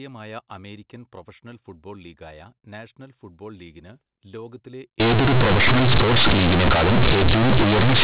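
The first five seconds come through as ordinary narrowband telephone speech. Then, right after "നാഷണൽ ഫുട്ബോൾ ലീഗിന് ലോകത്തിലെ" at 5.0 s and running to the end, it turns into companded audio read as linear. The mu-law bytes are being played as raw 8-bit samples with no expansion, so every level comes out huge. You get harsh, buzzy distortion, and the pauses fill with loud noise.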